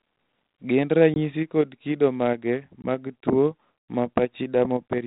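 Packet loss on an ADPCM call strikes at 1.14 s and 2.82 s. Each time roughly one 20 ms packet is lost and replaced by silence, leaving the decoder's predictor and step size out of step with the sender's. Each hard-edged gap ends with briefly distorted speech.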